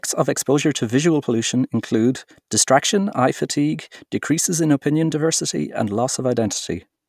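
No technical faults are audible.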